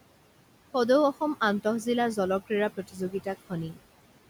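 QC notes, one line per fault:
Throughout: noise suppressor artifacts. The room noise, sitting about 17 dB below the speech, is pulled down by about 18 dB wherever the suppressor judges a band to be steady background, and this gain is recomputed frame by frame. As a result, the noise drops away in the gaps and comes back up beneath the speech.
2.77–3.26 s: speech cut by the noise suppressor. Within this half-second stretch, the suppressor mistakes some of the speech for background and turns it down along with the noise, by about 13 dB at the deepest point. Only around 150 ms in total is affected, most likely the softer, lower-level portions such as quiet consonants or trailing endings. Those parts sound swallowed and faint rather than fully missing.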